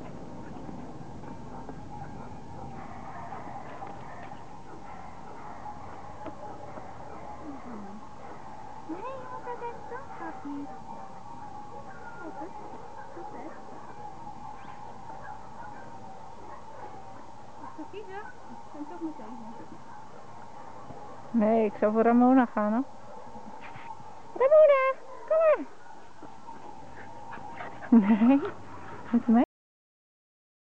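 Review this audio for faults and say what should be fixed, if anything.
The clip has a cut-off end. At 29.44 s the audio stops abruptly in the middle of a sound. It falls straight to digital silence, with no decay or tail, and stays silent for the remaining 1.2 s or so. The final buffers were never written out, so the sound is truncated rather than faded or finished. The fix is to re-export or re-record the ending. To prevent it, flush and close the file only after all buffered audio has been written.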